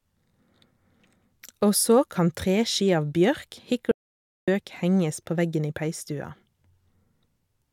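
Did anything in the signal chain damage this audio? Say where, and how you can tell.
Yes. There's an audio dropout to silence from 3.92 s to 4.48 s, just after "kan treski av bjørk" and picking up again at "henges på veggen i". The speech cuts off mid-flow and the gap is silent for about 0.56 s, with no room tone at all. That points upstream of the encoder, most likely the input device or its link dropping out briefly while the recorder kept writing silence. Whatever was said there is gone.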